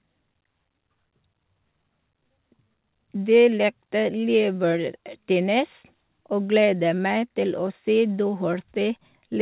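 This is a speech clip that has come through a WebRTC call path with a narrowband G.711 mu-law codec and nothing above 4 kHz, and nothing is technically wrong with it.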